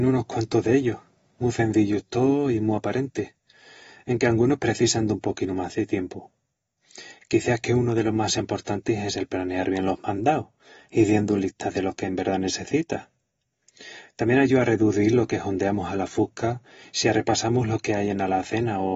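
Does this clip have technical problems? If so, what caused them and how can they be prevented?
Yes. Throughout, the speech sounds dull and smeared, with nothing above 7.7 kHz and a fizzy, warbling texture on sibilants. This is likely AAC compression: AAC-LC at a low bitrate, around 24 kbps, drops the upper band and coarsely quantises the rest. Encoding at a higher bitrate, or keeping a lossless master, would prevent it.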